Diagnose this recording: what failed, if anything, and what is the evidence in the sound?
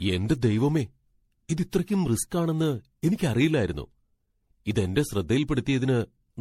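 The problem is at the codec stage, and it sounds like generation loss. All through the speech there's a swirly, smeared quality with a hollow, phasey edge, consonant attacks are blurred, and nothing comes through above about 16.4 kHz. The likely cause is the audio being decoded and re-encoded as MP3 around ten times, at something like 64 kbit/s. Each pass quantises on a shifted frame grid, so the noise and spectral holes keep stacking.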